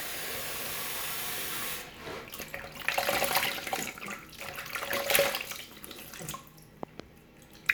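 A recording of sounds with two loud pop faults riding over it while the sound carries on underneath. The first, at 2.40 to 2.42 s, is a single sharp pop a little louder than the surrounding sound. The second, from 6.83 to 7.02 s, is a double pop well above the signal level. The likely cause is a sudden voltage pulse from a plug, switch, static or driver glitch, shaped by the circuitry after it.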